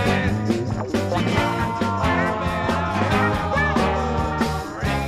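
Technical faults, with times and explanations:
No technical faults can be heard in the signal.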